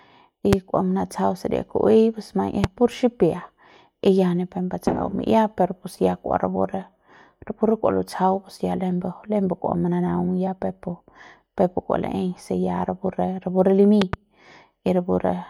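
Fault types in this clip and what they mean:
Loud pop: a sharp transient roughly 20 dB above the speech, likely a voltage pulse from a plug or switch. Single pops hit at 0.53 and 2.64 s, and a double pop follows "rapu re rapu re" at 14.0 s. Unlike a dropout, the speech continues underneath.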